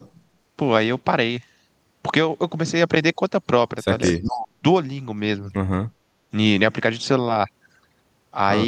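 At 4.0 s an echo leak appears. A delayed copy of the speech comes back about 240 ms behind the original. It sits roughly 15 dB below the main speech and lasts until 4.19 s. It sounds like a faint, late shadow of what was just said. The likely cause is a far end on a loudspeaker whose echo canceller did not fully remove what its microphone picked up, so the remainder was sent back.

From 4.13 s to 4.64 s, the speech is suppressed in double talk. This overlaps the tail of the echo. The talker's level falls sharply, around 35 dB at the deepest point, for about half a second. The speech dips. Both sides were likely talking at once. The echo canceller likely could not tell the near talker from the loudspeaker echo, so it turned everything down.

From 5.87 s to 6.19 s, the background is gated by the echo canceller. The room sound drops by about 16 dB for roughly 0.3 s, then comes back. The quiet gap is audible as a sudden hole in the ambience. 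While the loudspeaker was playing, the echo canceller clamped the microphone down hard, and then it let go.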